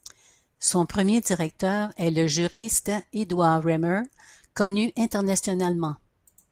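At 2.51 s and again at 4.61 s, the speech hits a burst of packet loss. About 120 ms, then 100 ms, never arrived. The receiver stretches the last sound into a fading buzz or hiss. Speech then resumes, with that stretch missing.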